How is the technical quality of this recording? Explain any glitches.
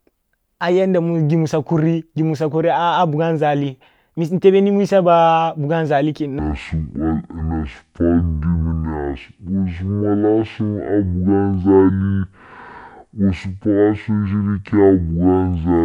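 The recording has one clear fault: from 6.39 s to the end, the speech plays back as a section at the wrong speed. It runs at half speed, so the voice drops to roughly ten semitones lower and the delivery drags out slow and heavy. This is likely caused by an editor or player running that stretch against the wrong clock. Pitch and tempo fall together at the same instant, which separates it from a pitch shift alone or a time-stretch that keeps the original pitch.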